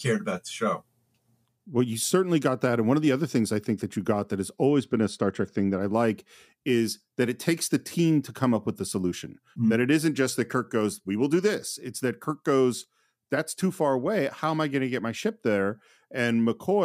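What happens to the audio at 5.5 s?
Channel delay, comb filtering, 4.69 to 5.81 s: one channel lags a couple of samples, so the mono sum dulls, notched near 10 kHz.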